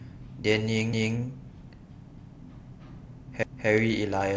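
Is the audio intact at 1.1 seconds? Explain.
No, a quarter-second of speech plays twice from 0.93 to 1.18 s, a stutter caused by overlapping chunks, where each 1-second chunk restarts 250 ms early.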